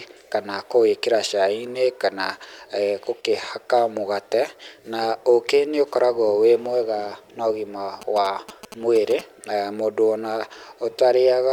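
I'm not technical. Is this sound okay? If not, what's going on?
No. GSM signalling bursts interrupt the speech from 8.0 to 9.2 s, just after "wĩ mwega na ũgima" and ending before "mũndũ ona". A 2G mobile phone nearby was signalling to its network in short radio pulses, and the audio equipment picked them up and turned them into sound. You hear a galloping dit-dit-dit of brief buzzes, each buzz vibrating about 217 times a second, quieter than the voice.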